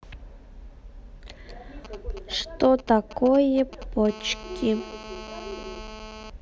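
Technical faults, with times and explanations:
1.85–4.07 s, GSM signalling bursts: a 2G phone nearby is only signalling, so it sends short clusters of radio bursts that the audio circuit rectifies. You get that galloping dit-dit-dit of brief 217 Hz buzzes, sitting roughly 15 dB under the speech.
4.09–6.30 s, GSM phone buzz: here the phone is on a call and transmitting steadily at 217 bursts a second. The circuit rectifies those pulses into a hard, raspy 217 Hz buzz full of harmonics, about 15 dB below the speech and unrelated to it.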